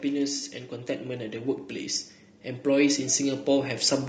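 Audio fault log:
Throughout: low-delay AAC compression. The speech has a rough, grainy texture, with a haze of noise sitting between the harmonics and a top band that sounds thinned and a bit synthetic. The likely culprit is a low-delay codec like AAC-ELD. Its short frames can't pin down pitch harmonics cleanly and eat up bits, so at a modest rate (the damage here fits something around 32 kbps) the harmonic detail smears into grit.
0.37–0.43 s: AAC frame loss with concealment. There's a brief smeared patch lasting about 40 ms, which fits two lost frames back to back. The decoder didn't get those frames, so it filled the gap by rebuilding from the last good spectrum with scrambled phase. That keeps the level steady but loses the real detail, and what you hear is a short blur rather than a dropout.
2.44–3.8 s: automatic gain rising. Over roughly 1.4 s the speech and the background both swell by about 5 dB. 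The automatic gain control judged the input too quiet and pushed its gain up gradually. Because the gain acts on the whole signal, the room noise climbs right along with the speech, which is the giveaway that it's gain and not the talker getting louder.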